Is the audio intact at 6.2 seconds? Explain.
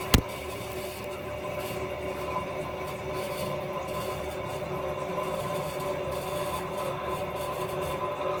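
No. At 6.2 seconds, as throughout the clip, the sound has a swirly, smeared, hollow quality with blurred attacks, likely from generation loss: repeated lossy re-encoding, about five passes consistent with Opus near 48 kbit/s, each on a shifted frame grid. A single encode at that rate, reaching 20.4 kHz, would not sound this degraded.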